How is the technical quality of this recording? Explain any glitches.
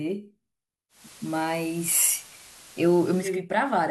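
The recording has one clear fault, digital radio blending to analogue, from 0.89 s to 3.41 s. The hybrid receiver lost its digital stream and cross-faded over about 0.21 s to the station's FM broadcast, then faded back. While on FM, hiss sits roughly 20 dB under the speech and the level shifts by about 1 dB, so the sound turns noisier and slightly different in loudness before the clean digital signal returns.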